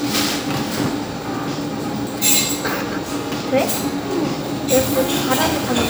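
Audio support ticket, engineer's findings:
Regular clicks every 1.17 s, about five between 0.47 and 5.15 s; likely clock drift buffer slips, roughly 150 ppm mismatch, a few samples dropped or repeated each time. Even spacing rules out random dropouts.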